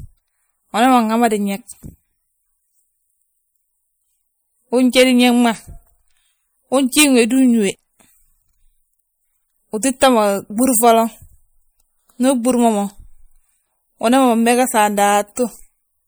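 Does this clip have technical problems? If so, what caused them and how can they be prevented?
Yes. MP3 compression runs throughout this speech: weak frequency components flicker between frames, giving a watery, swirly sound with metallic sibilants. This plainly audible damage is likely from a lossy encode at a low bitrate, which fits around 64 kbps. Encoding at a higher bitrate, or keeping a lossless copy, would prevent it.

Pre-echo appears at 15.36 s, a brief hiss of about 15 ms just before a sharp attack. The codec spread the noise meant for the loud onset across its whole block, filling the quiet moment before it and softening the attack. A higher bitrate or an encoder with better transient handling would avoid it.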